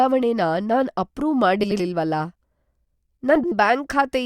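Around 1.63 to 1.81 s and again at 3.35 to 3.54 s, frames out of order swap two neighbouring 80 ms blocks, giving a garbled flutter.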